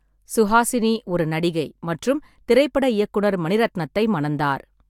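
No technical faults can be heard anywhere in the recording; the signal stays continuous and steady in level throughout.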